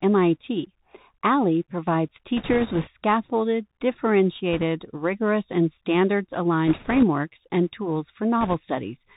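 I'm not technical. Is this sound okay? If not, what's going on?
No. The whole recording went through a Bluetooth CVSD headset codec, a phone-quality format. It cuts off the brighter sounds, so the speech sounds muffled and hissy, with scratchy s sounds.

There are also bit errors on the Bluetooth voice link, heard as bursts of rushing, crackly noise at 2.37 to 2.89 s, 4.53 to 4.64 s (just before "rigorous and standards"), 6.67 to 7.04 s (just before "and tools"), and 8.41 to 8.54 s.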